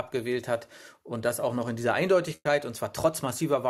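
At 2.35 s the sound smears into a held, fading continuation of the last sound for about 100 ms, falls silent for about 50 ms, then resumes at 2.48 s with roughly 60 ms of material skipped. This is a burst of packet loss: consecutive packets never arrived in time, so the receiver stretched and faded the last sound before jumping ahead, shifting playback timing by about 40 ms.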